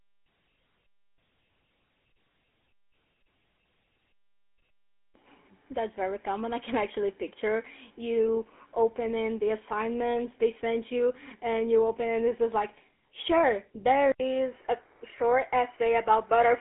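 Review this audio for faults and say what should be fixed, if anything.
The speech sounds buzzy and gravelly from start to finish, confined to a band of roughly 250 Hz to 3.5 kHz. This is GSM full-rate codec damage: the codec rebuilds the voice from a vocal-tract model driven by sparse, regularly spaced pulses, which fits a 13 kbps GSM full-rate stream. To prevent it, carry the audio over a wideband or higher-bitrate codec instead of GSM.

At 14.12 s, just after "just like sure there", the sound drops out for 80 ms and returns duller. It now passes nothing above 3 kHz, with a new noise floor well below the speech, though the loudness stays about the same. The likely cause is an input switched to a poorer device, such as another microphone or a headset's call profile. To prevent it, lock the recording input to one device so the system cannot change it mid-session.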